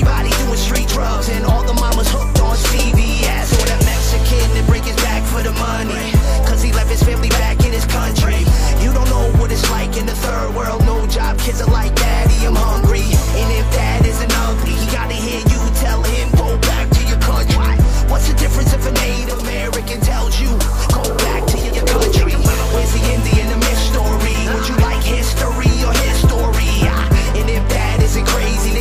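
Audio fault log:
19.10–21.91 s, digital radio blending to analogue: digital reception dropped and a 443 ms cross-fade to FM brought hiss roughly 30 dB down, level about 1 dB lower, before returning.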